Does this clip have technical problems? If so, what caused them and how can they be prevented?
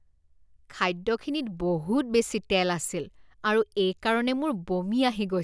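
No, nothing technical goes wrong in this speech recording, so there's nothing here that needs preventing.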